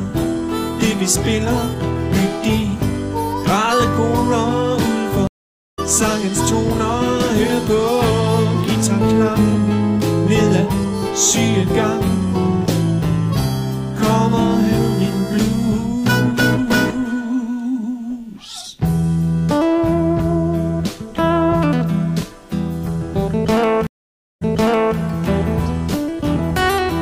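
At 5.27 s the connection drops and the player reconnects with a fresh decoder: a stream reconnect. About 0.51 s of silence follows, and the audio resumes roughly 0.7 s further on, so that stretch is skipped. A second stream reconnect at 23.87 s brings about 0.55 s of silence, but here the server resends a burst and playback picks up about 0.56 s earlier, repeating material just heard before settling by 24.97 s.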